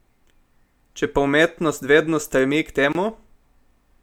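Speech pieces encoded separately were joined with each encoder's start-up delay and final-frame padding left untrimmed, producing a gap at a join of encoded pieces. From 2.93 to 2.95 s, a 25 ms silence cuts into the speech, which then resumes where it stopped.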